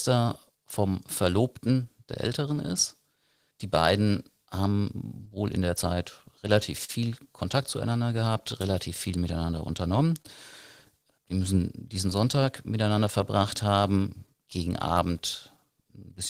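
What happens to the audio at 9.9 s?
At 9.9 s the speech is inside a stretch affected by three related problems.

The first is clock drift between sender and receiver, which runs through the whole clip. The sender's clock runs about 3 percent slow. The receiver's buffer keeps draining, so playback cannot stay smoothly in step. The result is small timing hiccups at uneven intervals, and 9.9 s falls among them.

The second is repeated timing corrections, from 0.52 s to 16.0 s. To cope with the slow sender, the receiver keeps stretching the audio by repeating short pieces. Playback runs at about 98 percent speed, adding roughly 400 ms across the span. Each edit is tiny.

The third is scattered short gaps, from 5.25 s to 15.59 s. About ten brief holes appear here, probably packets arriving too late for a buffer that keeps running dry. The receiver patches each one by extending the last sound. 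Together they cover roughly 150 ms, about 1 percent of the stretch, and none is longer than about 40 ms.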